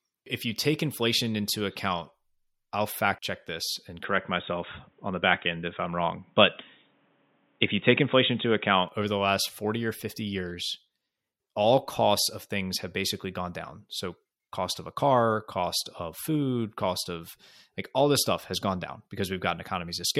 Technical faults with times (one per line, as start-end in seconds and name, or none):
4.04-8.89 input switched to a poorer device